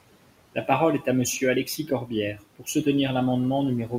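Throughout the clip there are noise suppressor artifacts. The suppressor treats the steady room noise, which sits about 18 dB below the speech, as something to remove and cuts it by about 18 dB in the pauses. The background therefore sinks between phrases and swells back under them.

From 1.65 to 2.11 s, and again from 2.34 to 2.67 s, there is speech cut by the noise suppressor. The suppressor mistakes parts of the speech for noise and turns them down along with the background. In the first stretch the level drops by up to about 8 dB, across roughly 150 ms in total. The second stretch is harsher, dropping by up to about 18 dB across roughly 200 ms, so the quieter parts there sound swallowed or faint.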